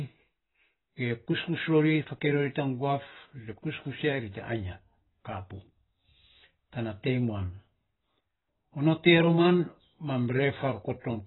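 From start to finish, the speech has likely been through AAC-LC compression at a very low bitrate, with damage heavy enough to point to something around 16 kbps. Starved of bits, the encoder drops everything above 4 kHz and quantises the remaining frequency bands coarsely. The result is dull, muffled speech without crisp consonants. Sibilants turn smeared and fizzy, and sustained sounds pick up a warbling texture.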